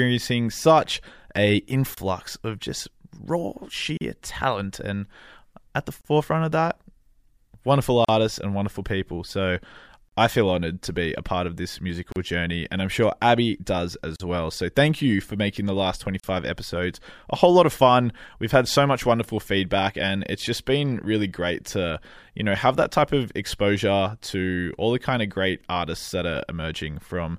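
Gaps at a join of encoded pieces open in the speech every 2.0 s, at 1.94, 3.97, 6.01, 8.05, 10.09, 12.12, 14.16 and 16.20 s. The first, between "such a" and "of just raw", lasts 29 ms; the rest last 38 ms, including those before "I feel honored to" and between "for making the last" and "episodes a whole lot". Each piece was encoded alone, so its startup delay and padded final frame stayed in. Each gap is a brief dropout with smeared edges, after which speech resumes mid-flow.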